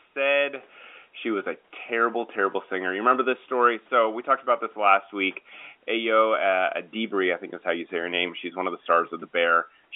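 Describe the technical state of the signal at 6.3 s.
At 6.3 s the audio is intact, with no fault present at that moment.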